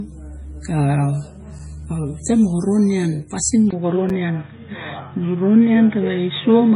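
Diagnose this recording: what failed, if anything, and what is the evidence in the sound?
Codec stage: the whole clip carries heavy MP3 compression damage, likely from encoding at a very low bitrate, which fits something near 24 kbps. Nothing survives above 10.5 kHz, so a spectrogram shows a flat ceiling across the entire speech. Below that ceiling, weak frequency lines drop in and out between frames. They appear as speckled, blotchy holes and are heard as a watery, swirly texture with smeared consonant attacks.

Buffer or streaming stage: there is a gap between chunks at 1.59 s and again at 4.10 s. Each is a hard-edged dropout about 6.5 ms long. They sit 2.5 s apart, which matches the audio being delivered in 2.5 s chunks with silence left at each join. On a waveform each shows as a thin flat-line notch. On a spectrogram it is a narrow vertical white stripe running through all frequencies.

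Capture stage: at 3.71 s the input switched to a poorer device, likely a different microphone or a headset call profile. There is a 20 ms silence at the switch. From there to the end the speech is dull and boxy, with nothing above 3.8 kHz, a level shift of about 5 dB, and a new noise floor roughly 55 dB below the signal. On a spectrogram the upper band abruptly goes empty at that point, and the waveform envelope steps in height.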